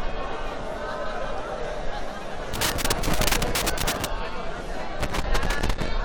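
Loose connector crackle breaks out from 2.54 to 4.05 s and again from 5.00 to 5.89 s, a ragged scratching burst each time. A worn or dirty contact is making and breaking as it shifts, chopping the sound intermittently.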